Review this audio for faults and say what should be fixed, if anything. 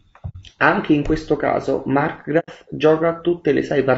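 The speech is rough and grainy throughout, with noise filling the gaps between pitch harmonics and an upper band that sounds thinned and somewhat synthetic. The damage is plainly audible and points to low-delay AAC compression, likely AAC-ELD at a low bitrate around 32 kbps. This codec uses short frames for low latency, which resolve voice harmonics coarsely and spend bits less efficiently, so a tight budget degrades the spectrum. Raising the bitrate or using a higher-resolution codec where latency allows would prevent this.

Two soft-edged dropouts occur, at 0.29 to 0.36 s and at 2.39 to 2.49 s. They sound like AAC frame loss with muting: the decoder zeroed the spectrum of missing frames, and the overlapping windows faded the sound out and back in rather than cutting it. The gaps correspond to about 60 ms and 90 ms of lost audio, which fits two and three lost frames respectively. Packet-loss concealment or forward error correction on the transport would prevent these holes.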